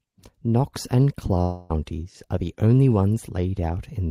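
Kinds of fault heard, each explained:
Long network dropout: from 1.41 to 1.71 s the speech turns into a fading buzz for 280 ms with no silence, then resumes with that stretch missing, likely lost packets concealed by the receiver; a spectrogram shows smeared, repeating harmonics decaying away.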